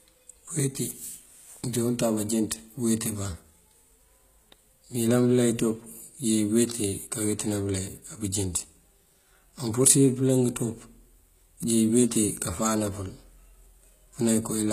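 Speech throughout whose treble sounds gritty and lispy on s sounds, with nothing above 14.9 kHz, likely from HE-AAC compression at a rate that fits about 20 kb/s, rebuilding the high band from copied lower bands.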